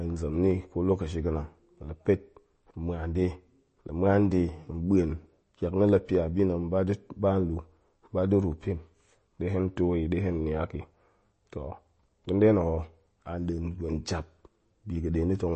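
Low-bitrate MP3 compression, likely the cause, affects the whole of this speech recording. The sound points to an MP3 encode at around 32 kbps, too few bits to code every frequency line. The encoder drops the weaker lines, and they switch on and off between frames, giving a watery, swirly texture that is plainly audible across the clip. Nothing is present above 8.3 kHz, consistent with the encoder's fixed treble cut, so sibilants lose their top end, and attacks are smeared.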